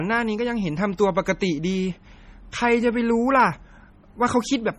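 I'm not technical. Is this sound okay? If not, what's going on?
No, not quite. This speech clip sounds like low-bitrate audio saved at a high bitrate, and that's the likely cause of what you hear from start to finish. At some point it was squeezed hard into a small MP3, which stripped out detail and left audible artefacts. It was later saved again as a bigger, better-quality MP3, but that can't bring back what was lost, so the damage from the first squeeze is still there throughout.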